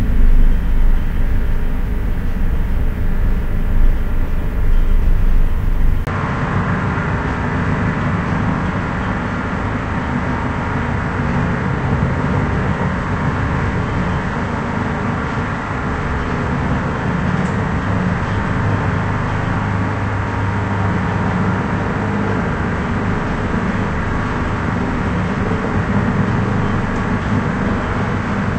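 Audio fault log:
6.05 to 28.58 s, likely an input switched to a poorer device. A 20 ms gap comes first. The sound then drops about 5 dB and loses everything above 8.3 kHz. A new noise floor sits roughly 35 dB down.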